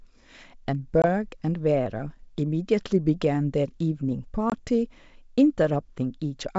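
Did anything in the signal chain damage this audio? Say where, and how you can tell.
Yes, it's packet loss on an ADPCM call, so a network problem. There are hard-edged silent holes at 1.02 to 1.05 s and 4.50 to 4.58 s, each about 20 ms of lost audio, roughly one packet. ADPCM carries its predictor and step size forward from sample to sample, so after a gap the decoder is out of step with the sender and has to catch up. The wideband G.722 coding underneath sounds clean, consistent with its top 64 kbit/s mode.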